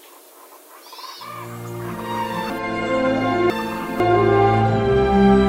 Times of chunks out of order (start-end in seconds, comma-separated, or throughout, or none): 2.50-4.00